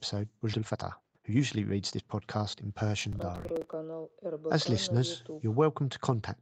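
At 0.53 s there is a skip ahead. A stretch of roughly a second and a half of speech was discarded while later audio was already queued, so playback jumps forward with no gap or fill, and the two sides of the cut butt together almost directly.

From 0.57 to 2.77 s comes a jitter buffer speed-up. Too much audio had built up in the buffer, and the receiver trimmed it back by repeatedly removing short pitch-period-length pieces. The speech runs at about 131% of normal speed at unchanged pitch, sounding hurried, with roughly 0.7 s taken out in total.

Between 3.01 and 3.73 s there is processor overload crackle. A run of missed processing deadlines, which fits small buffers of around 5 ms, left each late buffer holding stale audio with hard edges. The repeated fragments are heard as a gritty, tearing crackle over the speech that stops once the load clears.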